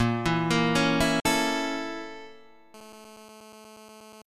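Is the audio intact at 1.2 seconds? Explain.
No. A digital broadcast dropout runs from about 1.20 to 1.26 s. The receiver stopped getting valid frames, consistent with two lost frames, and muted until good data returned, so roughly 48 ms of the programme is gone rather than delayed. A 3 ms fade makes the cut sound abrupt, a brief hole in the sound. On a waveform it appears as a flat near-silent gap, and on a spectrogram as a blank vertical band across all frequencies.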